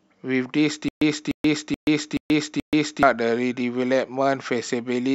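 Between 0.88 s and 3.03 s there's a stutter with silent gaps. The same 0.3 s burst of speech repeats five times, each followed by 130 ms of dead silence, on a steady 429 ms beat. It's likely a stalled stream replaying its last fragment at each retry, and the audio that should have played there is lost.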